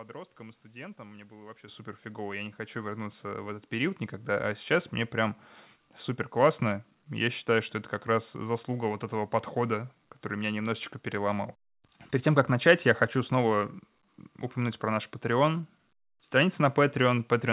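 Microphone volume stepped up at 1.68 s, between "было вообще" and "супер фигово", and again at 2.70 s. The call software judged the input too quiet and raised the device's microphone volume in a single jump, about 10 dB the first time and about 4 dB the second. Voice and room background rise together instantly, the first time mid-speech, heard through the narrow call path with nothing above 4 kHz, which fits G.711 A-law.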